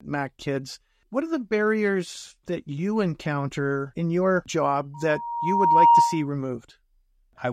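From 4.94 to 6.29 s a loudspeaker feedback squeal appears: the microphone re-amplifies its own loudspeaker until a single 940 Hz tone swells over about a second to roughly 10 dB above the speech. A steady hum or interfering tone would not build up by itself like this.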